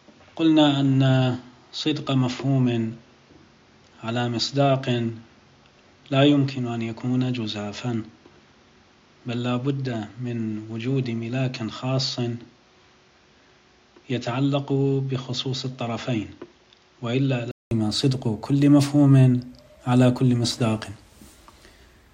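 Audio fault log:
0.00–17.71 s, input switched to a poorer device: the sound is dull and a few decibels quieter, with nothing above 7.1 kHz and a faint added noise floor, then opens up after a 200 ms silence at 17.71 s. The likely cause is a narrower-band input device in use until that switch.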